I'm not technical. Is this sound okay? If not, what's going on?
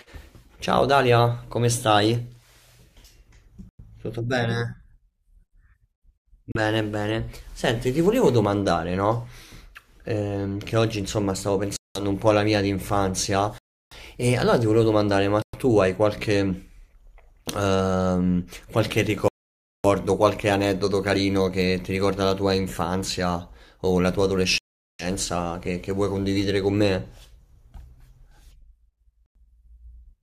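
No. The speech goes silent eight times, at 3.69, 6.52, 11.76, 13.58, 15.42, 19.28, 24.58 and 29.26 seconds, for between about a thirtieth of a second and over half a second. These brief dropouts to silence point to a likely Bluetooth stall.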